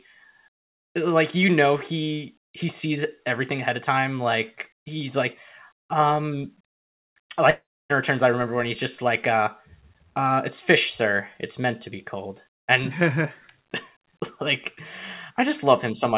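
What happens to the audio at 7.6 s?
A long network dropout, with packets likely failing to arrive, spans 7.5 to 7.92 s. The receiver stretches the last sound into a fading buzz, then 0.29 s of silence follows, and 0.4 s of audio is lost before "returns i remember when".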